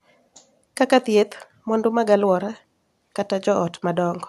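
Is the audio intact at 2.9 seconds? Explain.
Yes, the audio is intact at 2.9 seconds, with no dropout, click, distortion or other fault at that moment.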